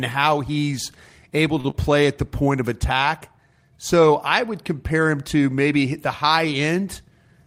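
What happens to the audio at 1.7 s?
Just after "how he's able", from 1.60 to 1.67 s, the sound is briefly held too long, a drawn-out stretch of about 40 ms with a faint buzz or dip. This is a short stall from a late packet. The next packet had not arrived when it was due, so the jitter buffer ran dry and the receiver extended the last sound until it came in. Playback then resumed from the same point, so nothing is lost, but everything after it runs about 40 ms later.

Immediately afterwards, from 1.70 to 1.75 s, just before "play at the point", there is a quick smear or wobble where about 30 ms of real audio is gone. This is short concealed packet loss. That stretch never reached the decoder in time, so the receiver bridged the gap for about 37 ms by continuing the preceding sound, then blended back into the real audio.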